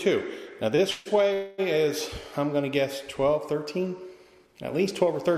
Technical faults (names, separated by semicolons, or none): short stall from a late packet; call audio freeze; jitter buffer speed-up